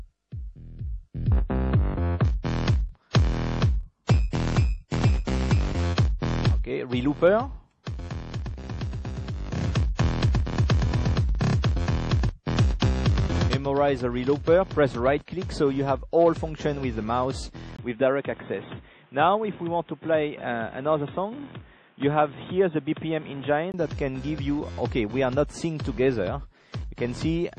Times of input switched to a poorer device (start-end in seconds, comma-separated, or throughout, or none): 17.77-23.74